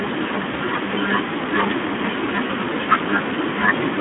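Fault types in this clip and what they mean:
Speex codec: an older CELP speech codec, here running at what sounds like roughly 11 kbps through a 200 Hz to 3.5 kHz line band, so the speech comes out plainly hoarse and grainy, with a thin, noisy edge from the sparse excitation coding all the way through.
VoIP packet loss concealed by the speech codec: around 0.51 s and again at 2.47 s a single 20 ms frame goes missing, and the decoder papers over it by stretching the previous sound into a brief, fading smear that lingers a little past each gap.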